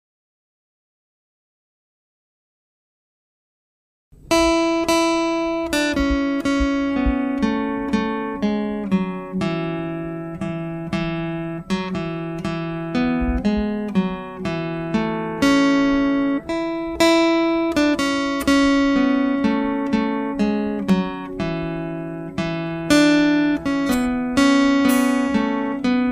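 At 20.90 s there is a repeated buffer: fresh audio failed to arrive in time, so the device replayed its last block once more. The block lasts 1.45 ms, which fits a 64-sample buffer, so the repeat is heard as a click or brief buzz rather than a stutter.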